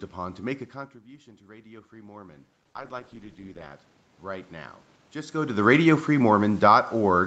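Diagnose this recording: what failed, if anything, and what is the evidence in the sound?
The call processing's automatic gain control is rising from 1.04 s to 5.43 s. After the talker backs off around half a second in, the input sits about 16 dB lower, so the gain creeps up about 14 dB, and voice and room noise swell together.

There's a call bitrate drop at the codec between 2.65 s and 3.81 s. The sound turns coarse and watery, bottoming out for about 1.1 s. That fits the encoder being squeezed from something like 64 kbps down toward 13 kbps after the bandwidth estimate fell.

Then there's automatic gain falling from 5.51 s to the end, after the talker moves again around 5 s. It sinks steadily, background and all, as the same gain control pulls back its gain.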